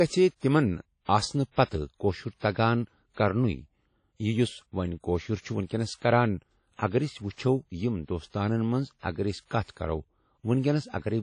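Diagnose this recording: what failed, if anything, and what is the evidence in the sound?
Codec stage: the speech rings and sounds washy, with hiss that rises and falls with the signal and nothing above 10 kHz. This is likely WMA compression, and the damage fits a low bitrate around 32 kbps.

Pre-echo, also at the codec stage: a brief hiss runs ahead of sharp attacks at 5.97–6.02 s, just after "وۄنۍ کٔاشُر چھ ونکٮ۪نس", and at 9.63–9.68 s. Quantisation noise spread across each block smears 45 and 54 ms before the onset.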